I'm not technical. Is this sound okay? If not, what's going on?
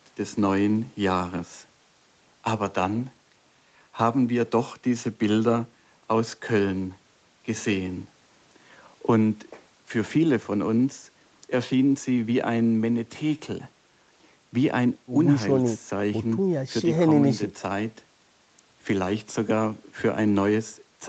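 Yes, the speech shows no technical faults, and the only limits you can hear come from normal call processing: the microphone processing and the Opus call codec together leave nothing above about 8 kHz, which gives the typical slightly muted sound of an online call.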